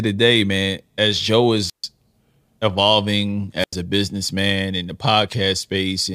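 At 1.66 s and again at 3.59 s you get a wireless microphone squelch dropout: the radio link fades, hiss swells, then the receiver mutes for about 140 ms and 90 ms respectively. The speech comes back with "a businessman in the" after the second one.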